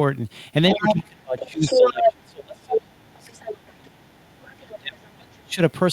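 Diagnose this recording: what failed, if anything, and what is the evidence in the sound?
A second voice breaks through at 0.71 to 0.94, 1.38 to 2.13, 2.72 to 2.80, 3.28 to 3.75, 4.73 to 4.79 and 5.10 to 5.47 s. It starts as loud as the talker, then fades well below. This is the other side's voice leaking through, likely residual echo that call processing's echo canceller failed to remove from the microphone.

The talker's voice dips and breaks up from 0.75 to 3.38 s and from 3.76 to 5.60 s, falling by roughly 30 to 35 dB at worst while the far voice plays. This is speech suppressed in double talk, likely the echo canceller turning everything down when both sides spoke.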